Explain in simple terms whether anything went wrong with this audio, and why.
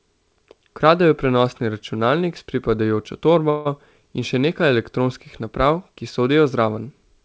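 Around 3.50 to 3.67 s there's a call audio freeze: for about 0.15 s the speech stretches into a fading buzz, likely because packets got stuck in transit and the receiver ran out of audio. Then the speech picks up exactly where it stopped, so nothing's lost, just pushed a bit later.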